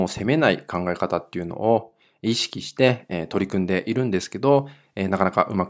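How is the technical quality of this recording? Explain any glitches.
Nothing to flag: no glitches or technical faults turn up anywhere in the recording.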